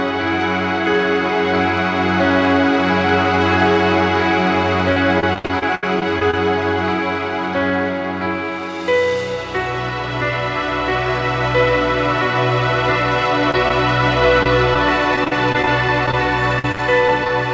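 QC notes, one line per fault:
4.92–6.34 s, repeated packet loss (robotic sound): eleven gaps in under a second and a half, the longest about 75 ms, with roughly a quarter of the stretch patched by stretching the last bit of sound. The constant fill-and-resume gives that choppy, chopped-up character.
13.51–13.54, 13.68–13.71, 14.43–14.46 and 14.74 s, short concealed packet loss: four tiny dropouts of 10 to 30 ms each, filled by carrying the previous sound forward and blending back in. You hear each one as a quick smear or wobble.
15.16–16.14 and 16.59–17.30 s, repeated packet loss (robotic sound): two more choppy runs, nine gaps (longest 32 ms) and then six (longest 47 ms), with about 14% and 20% of each span concealed. It's the same robotic patching, a bit lighter than the first run, over a call band that tops out around 8 kHz.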